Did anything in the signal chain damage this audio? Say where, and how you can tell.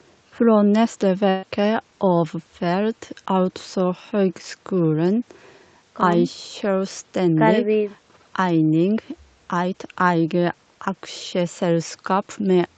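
Yes. A burst of packet loss from 1.29 to 1.45 s at the network stage: the receiver stretched the preceding sound for about 133 ms, fading it, and about 140 ms of audio went missing.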